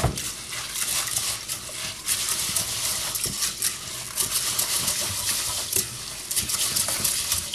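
The clip is a recording of sounds, and nothing is technically wrong with it.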